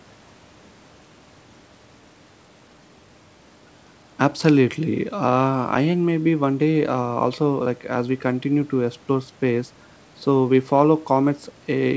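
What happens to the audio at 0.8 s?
Nothing goes wrong at 0.8 s; the speech passes through intact there, with only the ordinary wideband call sound of a G.722 link that carries nothing above 8 kHz.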